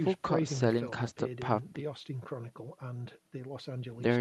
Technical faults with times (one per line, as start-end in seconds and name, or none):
none